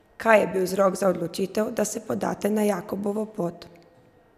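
Speech recording, no audible technical faults anywhere in it.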